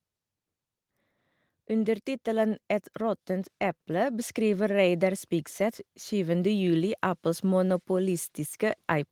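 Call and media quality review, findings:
Automatic gain rising, 1.78–4.40 s: speech and background swell together by about 5 dB. AGC raising gain on quiet input. Waveform envelope ramps up steadily; spectrogram brightens uniformly across all bands.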